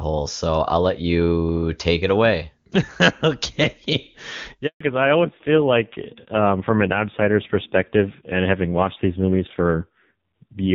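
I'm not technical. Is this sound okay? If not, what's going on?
No. At 4.66 s the speech cuts out for 0.14 s. This is a handover gap. The phone was moving the call from one network to another. During that switch, no speech got through at all. The sound fades almost instantly and there is a short silence. Whatever was said in that moment is simply gone. It cannot be recovered from the recording.

From 4.80 s to the end, the sound changes. This is a fallback to narrowband. Up to the gap, the call ran on HD Voice and the speech sounds clear. After the switch, the call drops to an older, low-quality phone codec. Everything above 4 kHz disappears. The voice loses its crispness and sounds duller and muffled. It also turns rougher.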